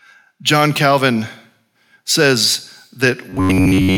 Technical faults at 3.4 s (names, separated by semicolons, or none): robotic sound from repeated short buffers